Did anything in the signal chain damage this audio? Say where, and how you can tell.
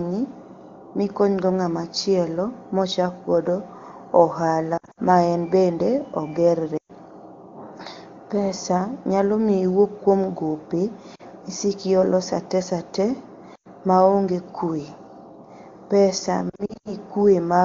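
Yes, lost AMR speech frames on the radio link, at 4.77–5.00, 6.77–6.91, 11.15–11.22, 13.55–13.68 and 16.49–16.94 s. The decoder stretches the last good pitch and vocal-tract settings with falling gain. On a spectrogram, harmonics smear flat and fade toward silence before speech returns weak.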